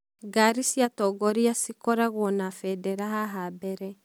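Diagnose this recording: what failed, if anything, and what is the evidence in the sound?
Nothing in the chain has failed: the speech signal arrives intact, with no audible trace of a breakdown at any stage between capture and playback.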